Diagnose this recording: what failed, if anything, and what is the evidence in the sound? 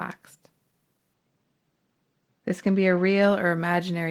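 Between 1.13 and 3.23 s the speech goes dull, which is channel delay (comb filtering). One channel slipped a couple of samples behind at the buffer stage, so the mono sum cancels the top end, with the first notch around 10 kHz.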